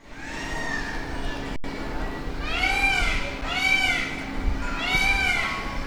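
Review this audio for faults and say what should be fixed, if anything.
There are two underruns with held sample: the sound freezes flat from 1.56 to 1.64 s (80 ms) and again briefly at 3.41 s. Each time the output buffer emptied and the converter just held its last value, so the audio stops without much of a click. Essentially nothing was lost while it stalled, so playback picks up where it left off and the restart is soft. To prevent it, give the output buffer more headroom.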